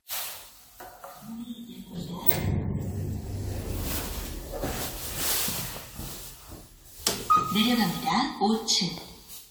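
From start to finish there's generation loss: a swirly, hollow smear with soft, blurred attacks. It's likely the sound went through an AAC-LC encoder around seven times, at something like 96 kbit/s, with each pass adding its own quantisation noise and spectral holes.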